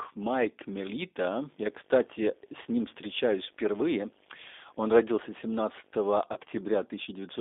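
Throughout the speech the sound is thin and band-limited, with nothing below about 300 Hz or above 3.6 kHz, and it has a plainly audible rough, synthetic edge. This is the G.729 codec, an 8 kbit/s-class VoIP coder. It discards the waveform and rebuilds each short frame from a vocal tract filter, a pitch predictor and a few pulses, and that sparse rebuilding leaves the grainy texture.

From 1.49 s to 6.11 s a steady low buzz with a fizzy hash above it sits well under the speech, at about 35 dB down. A very high tone near 15.6 kHz rides along with it. This is video or display buzz: a screen or video cable is coupling into the audio line. The buzz repeats at the 50 Hz field rate of the picture, and the high tone is the line-scan frequency leaking through.

At 6.33 to 6.39 s the speech briefly smears into a stretched, fading sound, and it stays weak and distorted for a moment afterwards. This is VoIP packet loss concealed by the speech codec. 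About 30 ms of audio went missing, which fits a single lost packet. The decoder filled the gap by extending its last pitch and filter with falling gain, and because each frame builds on the one before, it needs a little time to recover.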